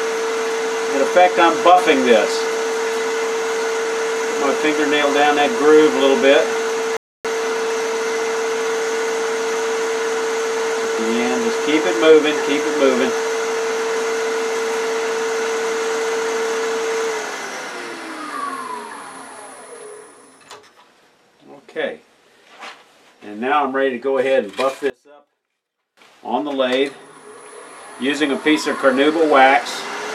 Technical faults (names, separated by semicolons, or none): rebuffering stall; one channel inverted